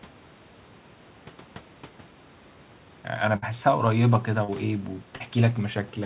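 At 3.36 s there's a burst of packet loss running to 3.44 s: about 60 ms never arrived, so the receiver stretched the last sound into a fading buzz or hiss and picked up again further on. Then at 4.44 s and again at 5.16 s you get short concealed packet loss, roughly 40 ms each, patched by extending the previous sound and blending back, which comes across as a quick smear or wobble. Everything rides on a call path whose codec cuts off everything above 4 kHz, consistent with G.711 A-law at 64 kbps.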